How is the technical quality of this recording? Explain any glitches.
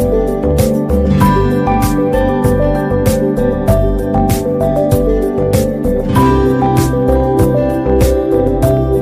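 Technical quality is compromised by hard clipping throughout. The signal is overdriven by about 5 dB, so roughly one percent of samples hit the ceiling and flatten. Those flat tops add high harmonics, heard as brief crackle on peaks rather than the continuous fuzz of heavier overload or soft saturation's rounded warmth.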